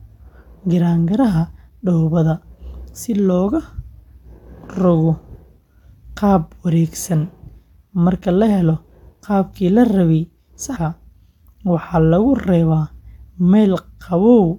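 A brief glitch breaks into the speech from 10.75 to 10.77 s. This is damaged data in a compressed stream: corrupted bytes made the decoder misread those frames, lose sync and skip ahead to the next valid frame header.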